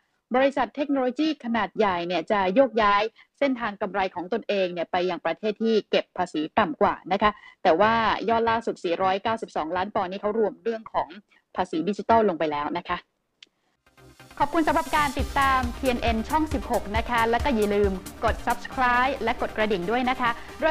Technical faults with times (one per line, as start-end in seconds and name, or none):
0.00-20.70 periodic clock jitter